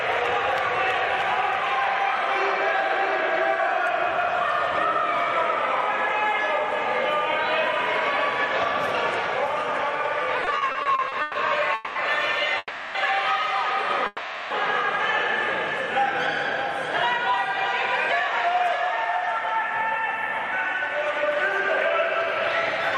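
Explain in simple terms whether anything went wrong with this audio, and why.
A few things went wrong. Throughout, there's a doubled audio track: a second, somewhat quieter copy of everything trails the original by roughly 0.7 seconds, with no room echo to it. Most likely the sound was picked up twice, once through a slower path.

From 10.40 to 11.37 s you get repeated stalls (stutter). Packets kept showing up late, so the playback ran dry ten times, each gap up to 130 ms, and stretched the last sound to cover. About a third of that stretch is filled-in sound, so it drags and hiccups.

Then come three short call audio freezes, at 11.75 s (about 0.21 s long), 12.58 s (about 0.37 s) and 14.07 s (about 0.44 s). Each time the sound hangs as a fading buzz or hiss, then picks up where it left off, so nothing is lost, just delayed. That's likely packets getting held up in transit.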